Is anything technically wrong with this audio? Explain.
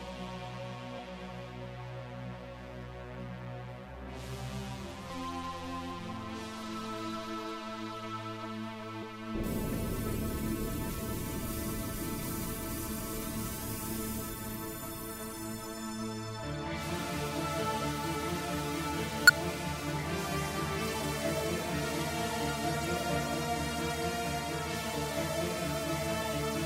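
Yes. Damaged data in a compressed stream causes brief blips at 0.98, 5.09 and 9.01 s, and from 19.27 to 19.30 s. Corrupted frames throw the decoder out of sync.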